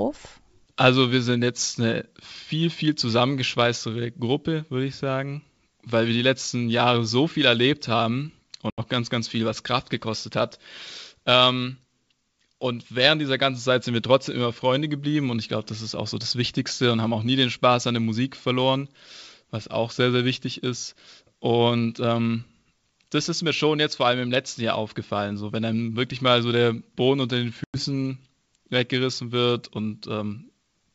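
Packet loss on an ADPCM call at 8.70–8.80 s and 27.64–27.82 s leaves hard-edged holes of about 80 ms and 100 ms. The desynchronised decoder then restarts the speech roughly before settling.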